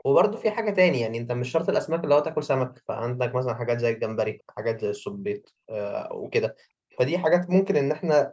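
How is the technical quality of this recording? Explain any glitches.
Three brief echo leaks can be heard in the speech. They fall at 0.33 to 0.43 s, 5.43 to 5.47 s and 6.91 to 6.97 s. Each is a faint copy of the speech trailing it by 384 ms. The first is about 20 dB down. The later two are far quieter. The likely cause is a loudspeaker on the far end whose echo canceller let some of its own playback back into the call. The audio also stops at 8 kHz and has its lowest bass removed by the call's normal microphone processing.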